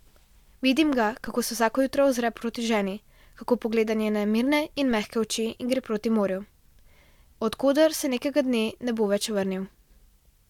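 At 1.27 s and again at 4.91 s, a DC step of about -32 dBFS shifts the waveform's zero line, each heard as a low thump that then decays through a 5 Hz high-pass.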